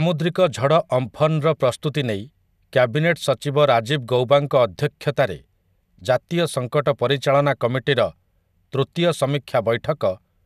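No technical faults can be heard anywhere in this speech recording. Nothing in the audio points to a problem in how it was captured, transmitted or played back.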